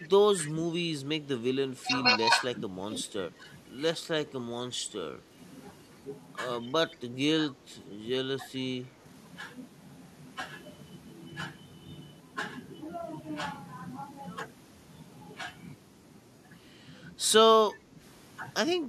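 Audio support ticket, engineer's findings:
Echo leak, 0.00–0.09 s: faint delayed copy of the voice trailing 183 ms behind, roughly 20 dB under the main speech. Likely the far-end loudspeaker picked up by its mic and not fully removed by the echo canceller, so the residue is sent back. Echo leak, 1.68–1.81 s: same 183 ms lag, much weaker, about 35 dB down, brief scrap only. Likely the same residual-echo path; the fixed delay points to one stable acoustic loop.

Speech suppressed in double talk, 0.36–5.36 s: voice dips, dropping as much as about 10 dB, around 1.5 s affected in total. Likely the echo canceller mistaking overlapping talk for echo and attenuating both. Same at 6.63–9.05 s: about 1 s affected, similar depth, likely the same suppressor. Again from 17.73 s to the end: short dips, under half a second in total, likely the same cause.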